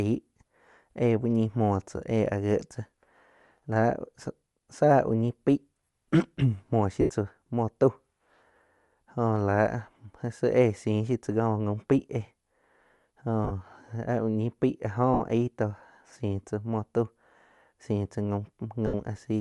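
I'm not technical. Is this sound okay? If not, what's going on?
No. Bluetooth LC3 compression runs through the whole clip. The speech has a breathy, grainy edge and lacks crispness at the top. This is likely the sound of Bluetooth LE Audio's codec squeezing the signal: it throws away much of the high-pitched detail and fills the gap with hiss-like noise. The result is a voice that sounds plainly fizzy and dull at the same time.

Lost LE Audio frames cause four short glitches, at 7.01–7.10 s (about 80 ms), 13.44–13.51 s, 15.14–15.21 s (60 ms) and 18.87–18.94 s (about 70 ms). Pieces of the wireless stream went missing, so the receiver filled each gap by repeating its last bit of sound with the details scrambled. You hear a brief noisy smear in place of the speech. The one at 13.44 s is patchier, several tiny dropouts spread over 60 ms.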